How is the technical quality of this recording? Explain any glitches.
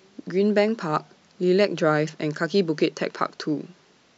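One glitch stands out in the speech, a brief burst of corrupted playback.

Damaged data in a compressed stream, from 2.07 to 2.10 s: a stretch of the encoded file holds wrong bytes, so the decoder misreads the frames at that point, loses its place in the bitstream and has to hunt for the next valid frame header before normal decoding resumes. The result is a short glitch lasting roughly 20 ms.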